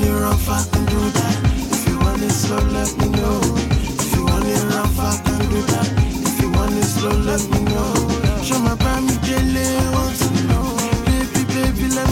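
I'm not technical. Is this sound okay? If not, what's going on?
Yes, nothing is wrong here.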